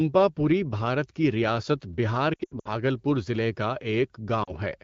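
From 2.33 to 2.71 s, between "بھارت کی ریاست بہار" and "ضلعے کا", the speech is hit by lost AMR speech frames: about 200 ms of frames is concealed across 320 ms, with runs of up to 80 ms. The decoder reuses stale pitch and vocal-tract settings at falling gain, so the sound warbles and sags, dropping to near silence within two frames in the longer runs. A brief repeat follows at 4.44 to 4.52 s (40 ms). Unlike a hard dropout, no clean gap opens.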